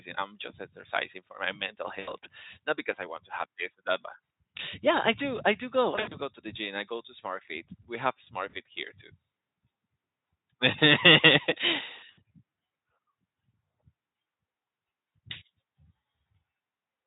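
At 1.99, 5.95, 8.49 and 12.11 s the speech smears into a short buzzy tone or coloured noise that fades. The first lasts about 80 ms, after "exercising for my mental". The second comes after "do I do go", with 120 ms of gaps over 160 ms. The third, 40 ms, falls just before "here too", and the fourth lasts 60 ms. This is VoIP packet loss concealed by the speech codec: the Speex decoder stretched its last pitch and filter through the missing audio while lowering the gain.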